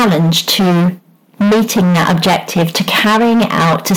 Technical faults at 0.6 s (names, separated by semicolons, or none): microphone overload